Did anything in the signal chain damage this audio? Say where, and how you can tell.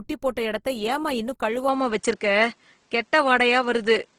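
Yes. Lossy compression, likely Opus at a low rate, grains the whole clip at the codec stage. The speech sounds rough and noisy rather than swirly, as band energy is kept but filled with folded or noise content. The band still reaches about 20.3 kHz, so the damage is starved bits rather than narrowed bandwidth.

An input switched to a poorer device at 1.68 s, right after "போட்ட எடத்த ஏம்மா இன்னும்", and stays until the end, at the driver or capture stage. There is no gap at the switch. From there nothing sounds above 9.2 kHz, the level shifts by around 5 dB, and a faint new noise floor appears, likely a different microphone or headset profile.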